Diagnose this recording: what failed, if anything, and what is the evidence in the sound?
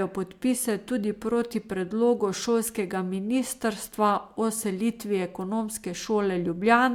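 No faults detected here.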